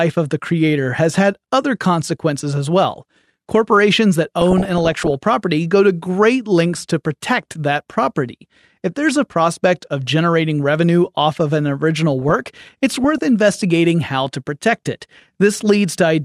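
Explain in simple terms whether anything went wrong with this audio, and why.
DAB burbling at 4.41 to 5.13 s and 12.22 to 13.18 s: weak radio reception let errors slip into the audio data, so short blips of noise break into the speech.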